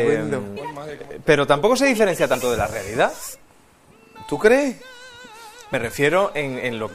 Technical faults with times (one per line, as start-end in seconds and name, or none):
0.56 damaged data in a compressed stream
1.04 dropped buffer (overrun)
2.35 dropped buffer (overrun)
3.34 dropped buffer (overrun)
5.74 dropped buffer (overrun)